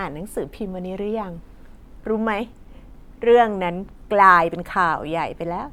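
Nothing stood out as a technical fault on listening to this speech recording.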